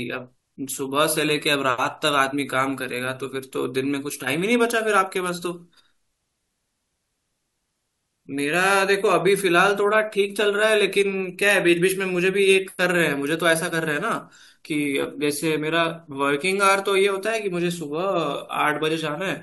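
Nothing goes wrong anywhere in this recording of speech, so there's no fault to point to at any moment.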